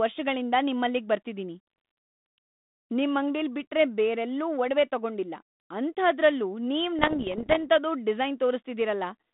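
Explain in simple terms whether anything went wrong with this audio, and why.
Something did go wrong, briefly. From 6.99 to 7.59 s, right after "ಒಡವೆ ತಗೊಂಡಿಲ್ಲ ಅಂಥಾದ್ರಲ್ಲೂ ನೀವ್", the speech breaks into pops and rough, crackly bursts. The level jumps up and down for a moment. These are bit errors on an ADPCM link, the kind used by cordless phones. Around one bit in a hundred got flipped. Each bad bit confuses the decoder's running guess of the next sound, so every pop rings on briefly.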